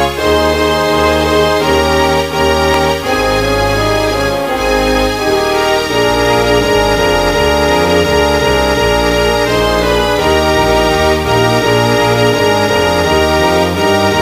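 Grainy distortion that shifts with the sound runs throughout, likely low bit depth without dither, consistent with 5-bit rounding. Quantisation error sits about 25 dB below the signal, visible as staircase steps on the waveform. At 2.74 s a repeated buffer causes a click or brief buzz as a 2.9 ms segment, which fits a 128-sample buffer, plays twice, showing a hard seam on the waveform.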